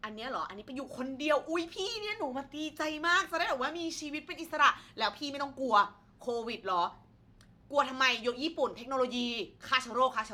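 Sample clock jitter runs throughout this speech clip: the converter clock wanders by under a microsecond, so samples land slightly early or late, adding a faint hiss about 45 dB below the signal that swells on loud, bright syllables and disappears in pauses.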